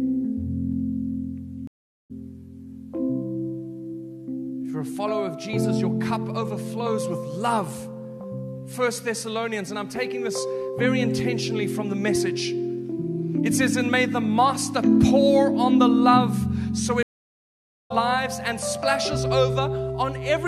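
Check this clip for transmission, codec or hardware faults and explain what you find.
Two stream reconnects. From 1.67 to 2.12 s and from 17.03 to 17.92 s, the connection dropped and a fresh decoder restarted mid-stream. Gaps of 0.42 s and 0.87 s are followed by audio resuming roughly half a second and 0.7 s further on. The skipped material, rather than a simple dropout, marks the reconnect.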